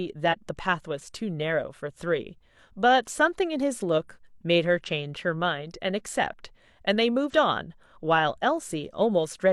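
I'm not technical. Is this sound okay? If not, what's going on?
No. There are three short glitches, at about 0.28 to 0.35 seconds, 4.83 to 4.90 seconds, and 7.29 to 7.34 seconds. Each is a brief chirp or blip in the speech. This is damaged data in a compressed stream. A small piece of the stored audio file got corrupted. The player can't read that piece properly. It loses its place for a moment, then finds the next good section and carries on.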